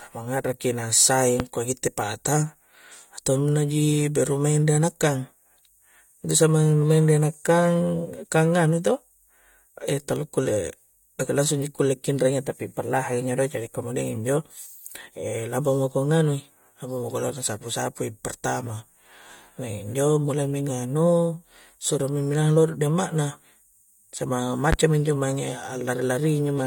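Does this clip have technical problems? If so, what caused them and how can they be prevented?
Yes. A loud pop hits at 1.40 to 1.43 s, before "na kua' kitte pata", and again at 24.72 to 24.76 s, before "injo mange'", peaking around 15 and 20 dB above the speech, which continues unbroken beneath each. A single sharp electrical thump rather than a breathy plosive, it is likely a voltage spike from a plug, switch or static discharge. Securing connections and grounding equipment prevents it.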